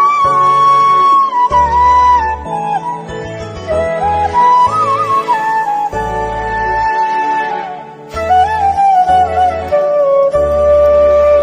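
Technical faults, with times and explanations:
No technical faults can be heard anywhere in this audio, and the signal stays steady and intact throughout.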